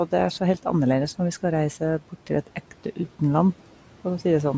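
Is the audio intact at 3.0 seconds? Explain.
No, not quite. From 2.47 to 2.99 s, ending right at the 3.0 s mark, the noise suppressor mistook parts of the speech for background and turned them down by up to about 10 dB, for roughly a tenth of a second in total. Those bits sound swallowed and faint.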